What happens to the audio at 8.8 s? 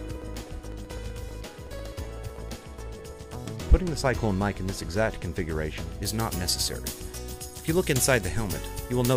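At 8.8 s the audio is in a stretch of pre-emphasis left on, running from 6.02 s to the end. A 75 µs FM treble boost, about 13 dB at 10 kHz, was never de-emphasised, so the sound is thin, bright and sibilant.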